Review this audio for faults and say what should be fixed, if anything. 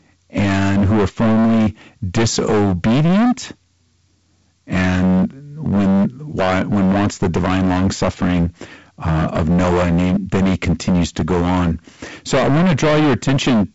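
Hard clipping runs throughout the speech, from start to finish. The level reaching the converter is about 22 dB more than it can pass, so roughly a third of the samples are sliced flat at the converter's limit. Those squared-off peaks add dense upper harmonics, heard as a constant harsh fuzz on every loud sound. The fuzz stops at the wideband telephone band edge near 7.7 kHz, which fits G.722 coding at its full 64 kbit/s rate. To fix it, lower the gain before the converter, leaving a few decibels of headroom, and add a limiter ahead of any stage with a fixed maximum level.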